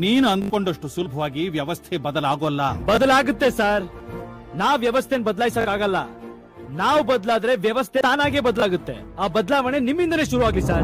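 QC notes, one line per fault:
0.42–0.50 s, repeated buffer: one 20 ms piece plays four extra times, giving a short buzz and about 70 ms lost. The waveform shows identical blocks with hard steps at each join.
1.05 s, compressed frames skipped: sound jumps ahead about 50 ms, likely two dropped frames.
2.95–2.97 s, repeated buffer: a 20 ms piece repeats once, heard as a click with about 20 ms lost. It appears as a duplicated block with a vertical line at the join.
5.61–5.65 s, repeated buffer: a 20 ms piece plays twice more, a quick stutter losing about 40 ms. The waveform shows three matching blocks with hard joins.
8.00 s, compressed frames skipped: about 70 ms jumps away, which points to roughly four lost frames.
8.60–8.62 s, repeated buffer: a single 20 ms repeat makes a click, losing about 20 ms. A spectrogram shows a thin vertical line, and the waveform shows a duplicated cycle block.
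10.52 s, compressed frames skipped: a small jump of about 20 ms, likely one frame.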